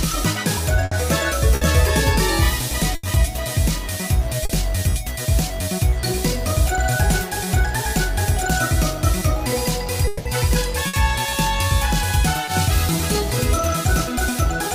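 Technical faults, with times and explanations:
0.85–0.93 s, 1.55–1.63 s, 2.95–3.05 s and 10.87–10.95 s: burst of packet loss. Each time the receiver extends the last sound for 60 ms (80 ms at 2.95 s) while it fades, then resumes later. The spectrogram shows smeared, repeated bands dimming before an abrupt restart.
4.45–4.51 s and 12.45–12.49 s: short concealed packet loss. Gaps of 40 ms and 20 ms are filled by continuing the preceding sound and crossfading back, heard as a brief smear or wobble. The waveform shows a slightly blurred patch with no hard discontinuity.
10.07–10.27 s: long network dropout. For 180 ms the preceding sound is held and fades as a buzz or hiss, with no silent stretch, and the audio then picks up further on. The likely cause is a prolonged network interruption. The spectrogram shows a stretched, decaying copy of earlier content followed by a sudden return.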